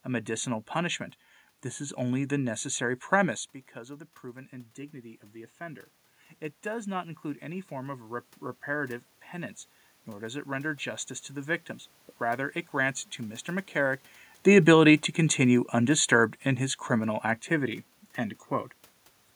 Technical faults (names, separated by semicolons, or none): automatic gain falling